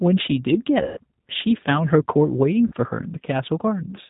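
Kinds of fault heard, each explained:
G.729 codec: Throughout, the speech is cut off above 4 kHz and sounds plainly rough and synthetic, which fits an 8 kbit/s G.729A codec rebuilding it from a vocal tract filter, pitch predictor and sparse pulses. Unlike a simple low-pass filter, it also adds this buzzy graininess.
VoIP packet loss concealed by the speech codec: At 0.83 s, 140 ms of speech is lost, and at 2.67 s, 60 ms is lost. The decoder stretches its last pitch and filter into a fading buzzy tone or coloured noise instead of the silence or click of a plain dropout, leaving the speech weak briefly afterwards.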